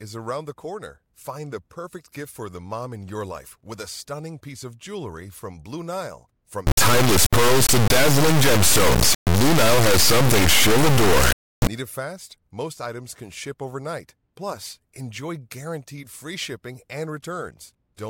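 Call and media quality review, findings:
Integer read as float, 6.67–11.67 s: extreme-level buzzing square wave, dropping to silence in quiet gaps. Probable format mismatch at the decode or mix stage. The sound fits 32-bit integer samples interpreted as 32-bit float, so values land near zero or far past full scale. Unlike plain clipping, output jumps between zero and the clipping limit.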